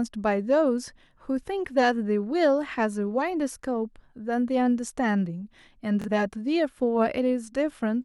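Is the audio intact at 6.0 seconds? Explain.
No, there's a Bluetooth stutter from 6.02 to 6.08 s. The speech data arrived late or got dropped, so the receiver kept replaying its last chunk, giving a brief buzzy repeat. About 46 ms goes missing, which fits two lost frames, and the speech picks up further along.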